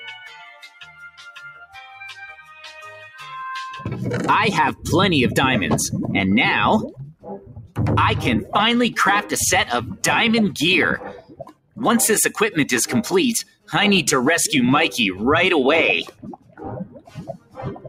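Throughout, a noise suppressor applied to music or sounds swings the level by around 15 dB. Held material and tails pump down while attacks pass, which sets it apart from a compressor's steadier gain changes. The sound cut by the noise suppressor sinks at 0.19–1.95 s (about 15 dB) and 7.12–7.78 s (about 18 dB). It also sinks at 10.98–11.82 s, 13.43–13.73 s and from 16.03 s to the end, by about 19 dB each time. Sustained parts fade and decays are cut short, rather than the whole signal dropping out as in a gap.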